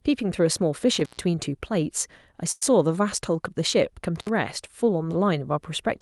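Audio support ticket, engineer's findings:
Intermittent contact, 0.98–1.21 s. Dropout of about 120 ms with crackle at both edges and faint hiss while open. Loose plug or cable breaking the signal path momentarily.

Intermittent contact, 4.16–4.29 s. Shorter open, about 66 ms, same crackling edges and residual hiss. Reseat or replace the lead.

Call audio freeze, 2.51–2.63 s. The last sound is held as a fading buzz or hiss for about 100 ms, with roughly 10 ms of near-silence, then the audio resumes where it stopped. Nothing lost, but everything after sits about 100 ms later. Likely packets delayed in transit, so the jitter buffer ran dry and concealment filled the wait. Band-limited top end of the call codec, about 12 kHz, throughout.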